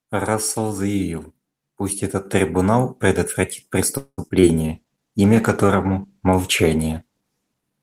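At 3.97 s the sound stops advancing for about 0.2 s, trailing into a fading buzz with 60 ms of near-silence: a call audio freeze, likely from delayed packets draining the jitter buffer. The waveform shows a decaying tail, then a flat gap.

Short concealed packet loss follows at 4.28 s and 4.40 s, where about 20 ms each was lost and replaced by continued sound. These are heard as brief smears and show as smoothed patches on the spectrogram.

From 4.58 s to 7.66 s a call bitrate drop from 32 to 14 kbps makes the sound rougher and more watery, and the spectrogram looks coarser and blotchier.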